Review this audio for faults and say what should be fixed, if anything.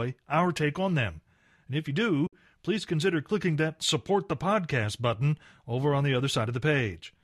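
At 2.27 to 2.33 s the speech drops into a soft-edged gap, which is AAC frame loss with muting. The decoder zeroed the missing spectra, and the overlapping windows fade the sound out and back in. The hole lasts about 60 ms, which fits roughly six lost frames. On a spectrogram it appears as a blank vertical band across all frequencies, and in the waveform the signal tapers to silence and swells back. Packet-loss concealment or forward error correction on the transport would fill or prevent such holes.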